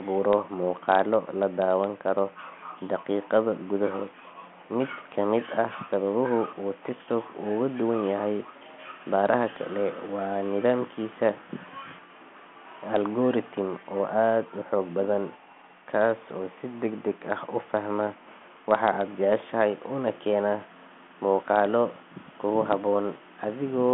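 Nothing stood out on listening; the speech is carried as telephone-band audio over a G.726 ADPCM link at 40 kbit/s, with nothing above about 3.8 kHz.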